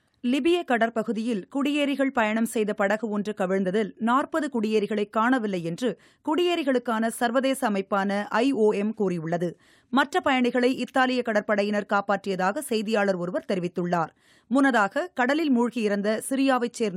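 No technical faults can be heard anywhere in this audio. Nothing in the sound points to a problem in how it was captured, processed or delivered.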